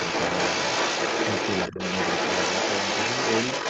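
From the first moment to the end, a second voice runs under the talker, somewhat louder than the talker's own speech. This is the other side's voice leaking through, likely loudspeaker echo the canceller left in the microphone signal.

Between 1.70 and 1.78 s, the talker's voice briefly sinks by around 10 dB while the leaking voice carries on. This is speech suppressed in double talk: with both sides talking, the canceller likely mistook the talker for echo and turned everything down. Unlike a network dropout, the sound dips rather than vanishing, and recovers within a fraction of a second. The call microphone processing's band limit of 8 kHz is normal and not a fault.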